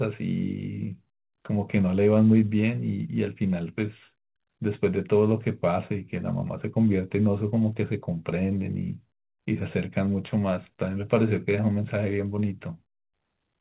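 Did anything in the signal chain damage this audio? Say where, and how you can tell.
No, nothing in the chain damaged this speech.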